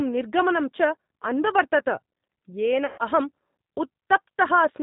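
From start to finish the speech sounds slightly rough and synthetic, with a plainly audible processed edge and nothing above 4 kHz, which fits an 8 kbit/s G.729A stream. This is the G.729 codec at work. It does not carry the waveform. It sends a vocal tract filter, a pitch predictor and a few pulses for each 10 ms frame, and the decoder rebuilds speech from those, so the fine detail and the top octaves never come through.

From 2.86 to 2.98 s the speech turns into a smeared, buzzy tone or coloured noise that fades out over about 120 ms. It recovers only gradually, staying weak for a moment after the gap. This is VoIP packet loss concealed by the speech codec. The sound fits six 20 ms packets going missing. The decoder filled the hole by repeating its last pitch and filter at falling gain. Because each frame builds on the previous one, the first frames after the gap start from a damaged state.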